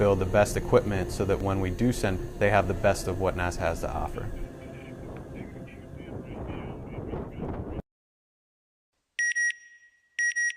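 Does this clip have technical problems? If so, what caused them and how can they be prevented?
Yes. Right around 2.19 to 2.21 s there's a skip ahead: roughly a second of audio went missing, either lost on the way or discarded when the jitter buffer overflowed, and playback jumps straight to later audio with no gap filled in. Sizing the jitter buffer generously and smoothing network delay spikes would help prevent it.

Just after that, from 2.29 to 4.15 s, there's a jitter buffer speed-up. The receiver had too much audio queued, so it trimmed tiny pitch-period chunks, about a tenth of a second in total, making things run at 105% speed without any pitch change. A more gradual, adaptive catch-up policy would keep this less noticeable.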